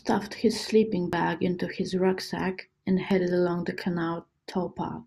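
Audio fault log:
1.13 s and 3.11 s, audio missing between chunks: the speech skips forward abruptly at each point, losing about 20 ms, with the two sides butted together and no gap of silence. The skips are 2 s apart, likely from a recorder dropping audio at each 2-second chunk boundary.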